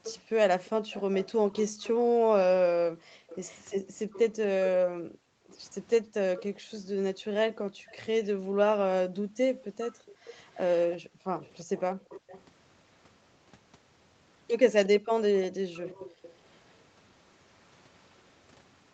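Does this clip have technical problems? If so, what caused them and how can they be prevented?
Yes. From 0.04 to 12.44 s and 14.85 to 18.15 s, a faint copy of the speech trails it by 0.35 s, about 20 dB down, which is likely an echo leak: a far-end echo canceller failing to remove its loudspeaker's pickup. Prevent it with headsets or better echo-canceller tuning and adaptation.

Between 4.85 and 12.09 s, the echo canceller gated the background, ducking the microphone while the loudspeaker played. The room sound drops out by up to about 40 dB, roughly three seconds in total. Prevent it by using gentler suppression or comfort noise so the background stays continuous.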